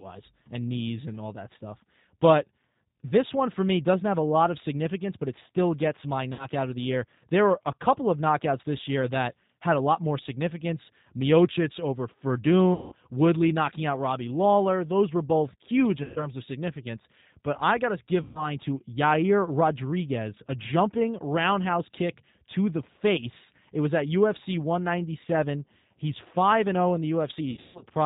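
The whole clip runs through the G.729 codec at 8 kbit/s, so the speech is cut off above 4 kHz and sounds plainly rough and synthetic. VoIP packet loss concealed by the speech codec hits at 6.33 s after "it still gets my", 12.74 s, 16.04 s after "were both huge", 18.23 s after "I got to give", and 27.51 s. Each time the decoder stretches the last sound into a fading buzz or coloured noise, and the audio stays weak or distorted afterwards.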